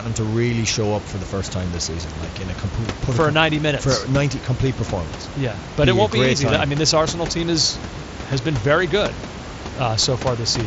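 No technical faults are present.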